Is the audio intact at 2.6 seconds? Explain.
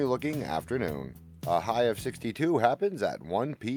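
Yes, at 2.6 seconds the audio is intact, with no dropout, click, distortion or other fault to be heard at that moment.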